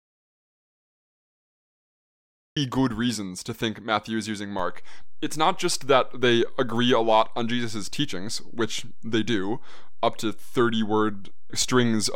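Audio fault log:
0.00–2.57 s, audio dropout to silence: The clip opens in silence, with no room tone or hiss at all, and the speech only starts with "good reasons to think" at about 2.57 s, as if arriving in mid-flow. The silence is already under way when the clip begins, so whatever preceded it is lost. The likely cause is an input lost to a disconnected device, a failed link or a mute, while the recorder kept writing silence.
4.59 s, DC step: Just after "is using", a single low thump or click is heard, while the speech carries on with its level and tone unaffected. At that moment the waveform's zero line jumps to a new offset, and the offset holds through to the end of the clip. Such a sudden shift in baseline is what a converter recalibrating or an offset-carrying input being switched in produces. The jump itself is the only audible part, because a steady offset is inaudible.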